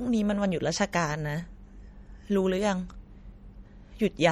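MP3 compression artefacts run through the whole speech clip, likely from encoding at a low bitrate, which fits about 48 kbps. With so few bits, the treble is cut off and weak frequency lines drop in and out between frames, leaving a watery, swirly texture, chirpy s sounds and smeared onsets.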